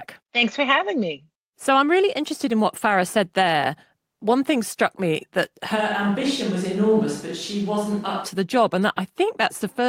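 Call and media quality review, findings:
Speech turns roomy and hollow from 5.77 to 8.24 s, after "thing struck me that". Sudden switch back before "to the job". Bass thins out. Level barely changes. Room noise rises to about 30 dB below the speech. Likely a switch to a distant microphone: the close mic's feed dropped, and a far-off pickup carried the room reflections and ambience.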